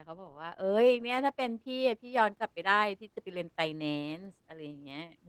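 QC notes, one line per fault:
Throughout: Opus voice compression, plainly audible. The speech sounds hoarse and slightly robotic from coarse SILK excitation coding, with a CELT layer above 8 kHz. The damage level points to hybrid mode at roughly 16 kbps.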